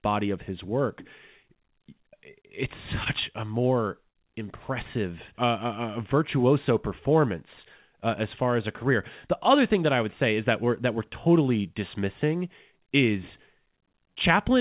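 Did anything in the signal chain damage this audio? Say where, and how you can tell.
Yes, short stalls from late packets in the jitter buffer: at 3.04–3.08 s, before "a more", and 4.10–4.17 s, after it, sound is held about 19 and 54 ms while the G.711 stream waits.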